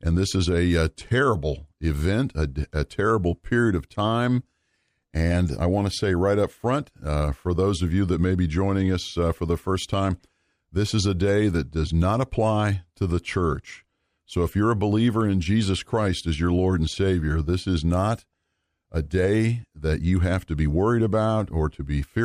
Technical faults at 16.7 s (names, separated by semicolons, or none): none